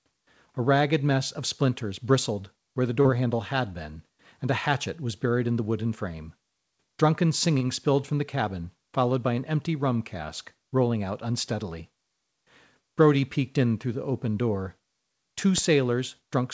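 At 3.02 to 3.08 s, between "splinters bristled where the" and "handle had been and", there is short concealed packet loss. About 30 ms of the stream arrived too late to decode, and the receiver filled it by extending the preceding sound before blending back in. The result is a brief smeared wobble in the speech.

At 15.58 s a single loud pop, roughly 10 dB above the surrounding speech, sits on top of the audio while the speech carries on underneath. A sudden voltage step or pulse, likely from a plug, switch or static discharge, produced the sharp transient.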